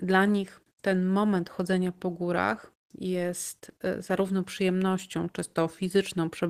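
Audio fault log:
No faults detected in the speech recording.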